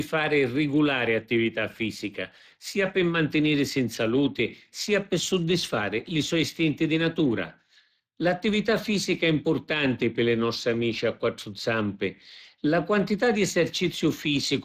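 Speex codec damage runs through the whole clip, from start to finish. Speex is a CELP speech codec that rebuilds speech from a filter model and a coded excitation, and the coding loss here is plainly audible as a grainy roughness laid over the speech. The bandwidth stops cleanly, with nothing above 15.2 kHz, and the amount of damage points to a Speex setting of roughly 22 kbps.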